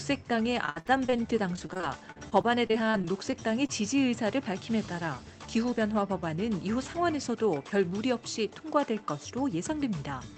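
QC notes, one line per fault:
0.65–1.20 s and 1.56–3.70 s: repeated packet loss (robotic sound). Closely spaced holes, up to 62 ms in the first run and 36 ms in the second, are filled by stretching the preceding sound, giving choppy audio with pieces missing; concealment covers about 37% and 15% of each run.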